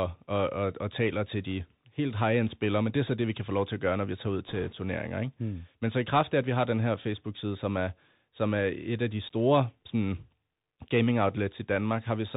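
Speech, carried throughout by the Bluetooth CVSD headset codec, which fits a 64 kbps link. Nothing above 4 kHz survives. Sibilants turn scratchy and a granular hiss sits underneath. Bit errors on the Bluetooth voice link appear just after "når vi tager ud", from 4.48 to 4.73 s. A rushing crackle comes from an error rate of a percent or two.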